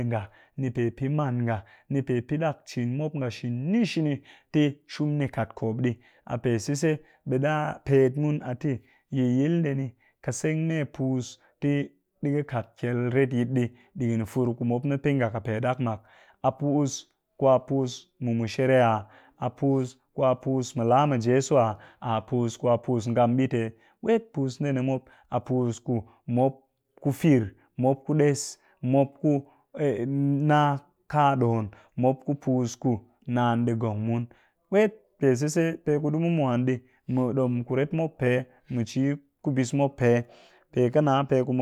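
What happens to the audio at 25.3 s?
Nothing goes wrong at 25.3 s; the speech runs through that moment intact, with no dropout, click, glitch or other fault.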